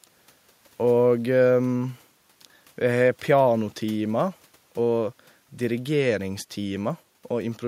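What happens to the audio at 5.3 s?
Nothing goes wrong at 5.3 s; the speech carries on intact through that moment with no audible fault.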